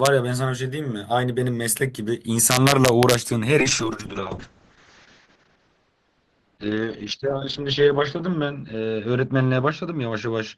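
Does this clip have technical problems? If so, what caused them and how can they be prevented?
Yes. There is integer overflow at about 0.06 s, and again from 2.51 to 3.14 s. The signal level went past the largest value the integer format can hold. Instead of being limited, it wrapped around to the opposite sign. Each peak over the limit flips across the full range, so loud moments turn into violent cracks. These are far sharper than ordinary clipping. The second stretch pushes about 2 dB over the limit, so it cracks harder. Prevention: saturate or limit gains and sums before converting to integer.

A call bitrate drop begins at 3.6 s and lasts to the end. The call's bandwidth estimate fell, and the encoder was told to spend far fewer bits. The coding becomes coarse, and the sound turns rough and watery. The top end is also cut, from about 20 kHz down to 8 kHz, so everything sounds muffled. 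The worst stretch lasts about 3.1 s. This fits a fall from roughly 40 kbps to 6 kbps. Prevention: keep the network path stable and set a sensible minimum bitrate.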